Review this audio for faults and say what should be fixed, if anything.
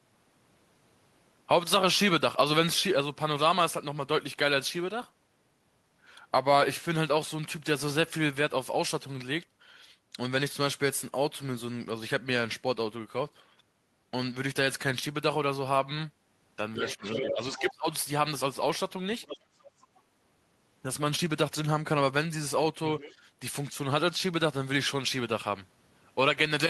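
Speech suppressed in double talk occurs from 16.75 to 17.04 s and again from 17.21 to 17.87 s, while the far-end voice is also present. The talker's level falls by about 15 dB in the first stretch and by about 25 dB in the second, with the speech dipping and breaking up. The likely cause is an echo canceller that could not separate near-end speech from the loudspeaker echo and attenuated both. Prevention: tune the double-talk detector so it holds near-end speech at full level rather than ducking it whenever the far end is active.

The other side's voice is leaking through at 16.88–17.35 s, 17.58–17.73 s, 19.22–19.39 s, 19.56–20.01 s and 22.99–23.12 s. It comes through as short scraps. The first burst is strong, only about 5 dB under the talker, and overlaps the suppression around 17 s. The later ones sit roughly 15 to 35 dB down. This is likely residual loudspeaker echo that the canceller failed to remove from the microphone signal. 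Prevention: improve echo-path convergence and residual echo suppression, or reduce loudspeaker-to-microphone coupling with a headset or lower playback level.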